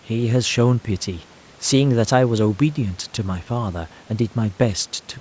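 Nothing stood out on listening to this speech, which went through call microphone processing with its usual loss of the lowest bass and nothing above 8 kHz.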